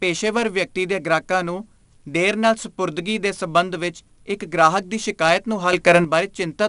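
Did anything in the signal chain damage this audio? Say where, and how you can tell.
Yes. At the codec stage, 4-bit ADPCM compression leaves a gritty hiss riding on every loud stretch of speech throughout, with roughness on sharp onsets. A spectrogram shows a hard ceiling near 10.7 kHz and a noise floor that rises and falls with level, which fits a rate around 88 kbps.

A sudden gain jump follows "ਗ੍ਰਾਹਕ ਦੀ ਸ਼ਿਕਾਇਤ ਨੂੰ": from 5.73 to 6.05 s the speech and the background noise together become about 8 dB louder. The waveform envelope steps abruptly at both edges with no ramp, likely from a gain setting in the processing applied instantly.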